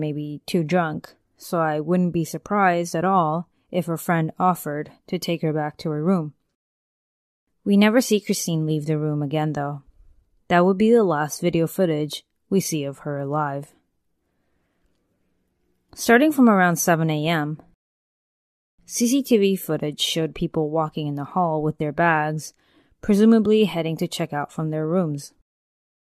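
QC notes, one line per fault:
17.74–18.79 s, rebuffering stall: the player exhausted its downloaded audio and waited for more, so the speech drops to silence for 1.04 s, then resumes exactly where it stopped, with nothing skipped.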